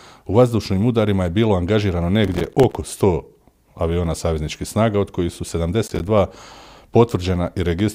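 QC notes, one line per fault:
2.24–2.75 s, processor overload crackle: right after "udarima je bilo angažirano" the speech tears into gritty crackle for about half a second. Dozens of short buffers, each around 5 ms, miss their deadline and drop to silence, so the signal is chopped by hard-edged gaps until the load clears.
5.87–6.11 s, processor overload crackle: following "snaga od kojih su", a shorter burst of about a quarter second. The same pattern of roughly 5 ms buffers repeatedly arriving late and leaving silent holes gives a rough, broken crackle over the speech.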